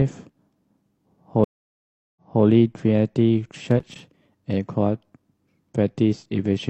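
A speech recording with two faults. At 1.44 s the connection drops in a stream reconnect: the audio goes silent for 0.72 s, then resumes 0.28 s earlier by 2.44 s, repeating a moment of speech. From 3.67 to 4.04 s, loose connector crackle from a worn contact making and breaking chops the signal into an irregular scratchy burst.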